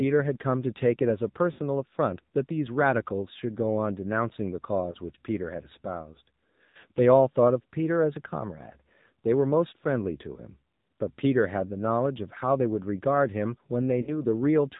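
The whole clip passed through the AMR narrowband mobile codec. The AMR-NB encoder models the vocal tract and excites it with a few pulses per subframe. The plainly audible damage fits a low mode around 7.4 kbps. Narrowband sampling removes everything above 4 kHz, so the speech sounds muffled and phone-like. The sparse excitation gives it a buzzy, synthetic edge.

Lost AMR speech frames then interrupt it four times. Each time, the decoder repeated its last good pitch and vocal tract parameters at falling gain. From 1.52 to 1.60 s, about 60 ms of concealment draws the sound out and dims it. Between 4.92 and 4.97 s, a single 20 ms gap gives a short dip. From 6.64 to 6.85 s, 120 ms of losses are scattered across about 200 ms, with runs of up to 40 ms, producing a stuttering warble and rough recovery. From 14.02 to 14.23 s, 40 ms of losses cause another brief fade.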